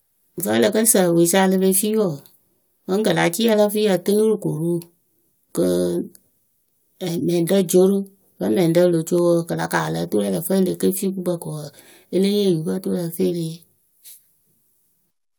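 No technical faults can be heard in this recording.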